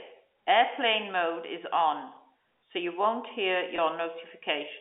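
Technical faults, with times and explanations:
3.76 to 3.78 s, packet loss with pitch repetition: A 20 ms stretch of speech drops out, which fits one lost packet. The receiver fills the gap by repeating the last pitch period. This gives a brief held, slightly buzzy sound before normal speech resumes.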